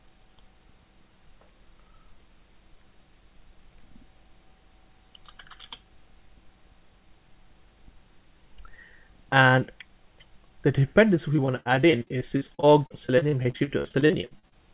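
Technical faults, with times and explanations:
11.36–14.54 s: repeated packet loss (robotic sound). The audio turns choppy and robotic, broken by 35 short holes of up to 59 ms each. Each lost packet was patched by extending the preceding sound, so concealment fills 905 ms, 29% of this stretch, heard through the call's 4 kHz band limit.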